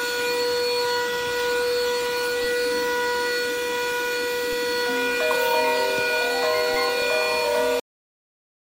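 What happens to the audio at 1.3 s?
Nothing goes wrong at 1.3 s: the sound plays through that moment intact, with no dropout, click or other technical fault.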